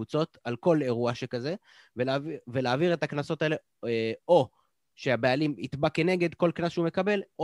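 Nothing here trips any alarms: no dropouts, glitches, or other technical faults turn up anywhere in this bit of speech.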